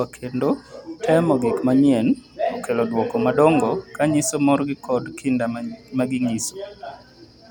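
No technical faults are audible anywhere in the speech.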